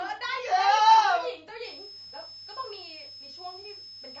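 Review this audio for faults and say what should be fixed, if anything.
The whole clip has a rough, grainy quality. The pitch harmonics sound smeared, with noise filling the gaps between them, and the top end sounds thin and a bit synthetic. That's the signature of low-delay AAC compression, likely AAC-ELD, the video-call codec. Its short frames can't resolve voice harmonics cleanly, and at a starved bitrate, something around 32 kbps, the damage is plainly audible. Give the encoder more bits, or use a standard-delay codec when latency doesn't matter.

From 1.64 s to the end there's a switching supply whistle, a high, thin tone near 5 kHz that wanders between about 5.18 and 5.24 kHz and sits roughly 15 dB below the speech. That drift is what you get when a switch-mode supply falls into an audible burst mode and its frequency shifts as the load changes. Power the mic chain from a clean linear supply or a properly filtered one, and keep the wall-wart away from the preamp.

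There are two short dropouts, at 2.09–2.13 s and 3.62–3.66 s, each about 40 ms of smeared noise where the speech should be. That's AAC frame loss with concealment. Each gap points to a single lost frame that the decoder patched by reusing the last good spectrum, so the loss gets blurred over rather than falling silent. Add forward error correction or redundancy on the transport, or give the link a bit more jitter buffering.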